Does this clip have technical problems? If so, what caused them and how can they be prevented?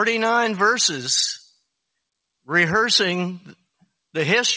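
No, there are no technical problems to report. The sound has passed through a call path and carries nothing above 8 kHz, which fits a wideband codec such as G.722.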